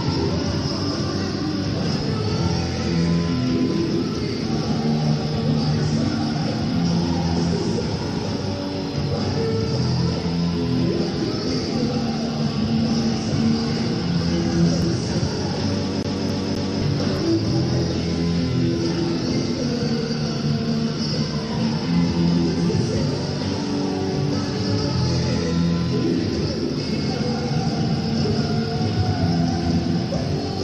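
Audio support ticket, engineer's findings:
CD stuck on one turn, 16.03 to 16.82 s. Same 263 ms segment plays three times, short mute at each jump. Even, rapid stutter. Probable component: disc or optical pickup. Mechanism: surface scratch knocks the laser back one track each rotation, replaying that turn's data.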